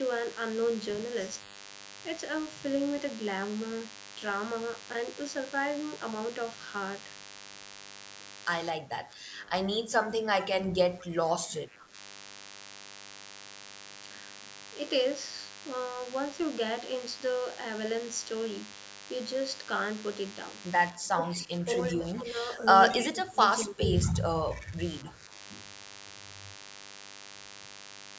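A speech recording, band-limited to 8 kHz as call microphone processing leaves it, carries a steady, thin 100 Hz buzz with many harmonics throughout, sitting about 15 dB below the speech. This is DECT cordless phone buzz: a nearby handset or base station sends a radio burst every 10 ms, and the audio circuitry rectifies it into sound. From 8.73 to 11.97 s, 20.93 to 22.66 s and 23.1 to 25.33 s, the speech dips, dulls and breaks up, losing roughly 10 to 20 dB at its deepest. This is likely speech suppressed in double talk, where the echo canceller, faced with both sides talking, turned everything down. Brief, faint repeats of the voice surface at 22.18–22.23, 24.04–24.19, 24.57–24.65 and 25.07–25.11 s, about 20 to 25 dB down and trailing by 230 ms. This is likely echo leak, where loudspeaker sound the canceller failed to remove was sent back down the line.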